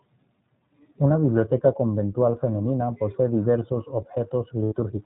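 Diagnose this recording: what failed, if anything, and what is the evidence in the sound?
The failure sits at the codec stage: the whole clip has passed through the iLBC codec, and its damage is plainly audible. Nothing above 4 kHz survives, so the speech is narrowband. It sounds clear but slightly rough and synthetic, which fits iLBC at 15.2 kbps with 20 ms frames. Each frame's excitation is coded on its own. That gives a steady roughness rather than the smeared, warbling highs of a transform codec starved of bits.

At the network stage there are lost iLBC frames from 4.64 to 4.74 s, a gap of about 80 ms, which fits four lost 20 ms frames. Instead of silence, the decoder fills the hole by repeating the last pitch cycle mixed with noise, so the gap sounds like a held, faintly buzzy vowel. A jitter-buffer stretch would smoothly slow the speech instead. Because iLBC frames stand alone, the speech recovers cleanly right after 4.74 s, with no lingering distortion.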